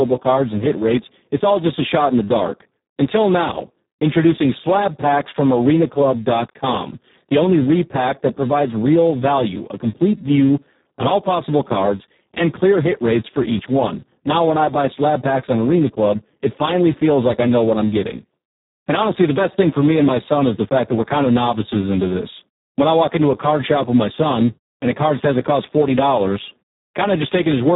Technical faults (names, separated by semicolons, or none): Speex codec